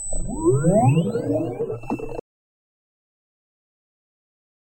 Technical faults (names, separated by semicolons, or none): audio dropout to silence